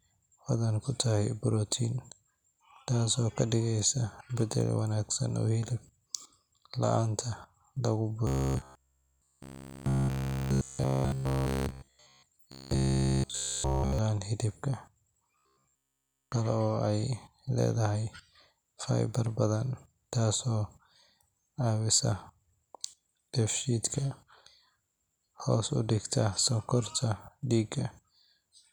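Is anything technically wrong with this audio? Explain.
Yes. Robotic sound from repeated short buffers appears from 8.27 to 12.26 s, just after "la’aanta lagu", then from 12.52 to 13.99 s and from 15.38 to 16.32 s. Audio likely arrived too seldom, so about 15 ms segments were looped in place of the skipped speech, which turns the speech into a rigid metallic buzz at 66.7 Hz.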